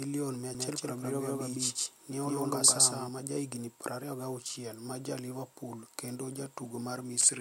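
From 0.55 to 3.09 s a doubled audio track appears: an equally loud, dry copy trails by roughly 150 ms, likely from a second, slower capture path, then cuts off abruptly.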